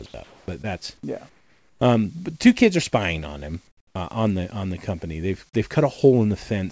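From 0.06 to 0.14 s, sound is dropped by the voice detector. About 70 ms of sound is replaced by steady noise, likely because the detector classed it as background.

Between 0.24 and 0.48 s, 1.29 and 1.81 s, and 3.67 and 3.95 s, comfort noise replaces the background. The detailed background becomes a featureless hiss, likely during discontinuous transmission. It is about 1 dB louder in the first gap, about 7 dB quieter in the second, and about 14 dB quieter in the third.

At 0.62 to 0.65 s, a short concealed packet loss fills about 14 ms of the 20 ms of missing audio by extending the preceding sound, giving a brief smear.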